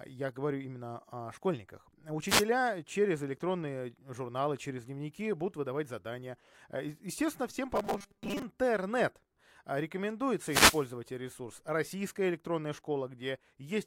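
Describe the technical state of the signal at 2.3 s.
At 2.3 s there is a wireless microphone noise hit from 2.27 to 2.45 s, after "говорю именно о школьниках": the radio link fades, so receiver static swishes over the speech. A spectrogram shows a broadband vertical smear, and the waveform shows a ragged noise burst.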